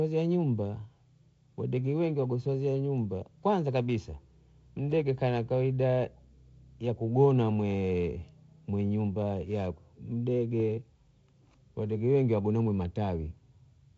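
No technical faults can be heard in this speech.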